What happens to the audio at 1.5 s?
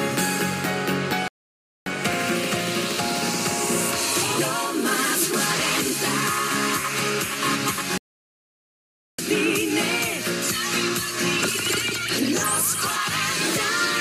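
At 1.5 s the audio is inside a playback stall running from 1.28 to 1.86 s. The sound cuts off mid-flow and goes silent for about 0.58 s, then resumes. The player likely ran short of data, or its thread was blocked, until it recovered.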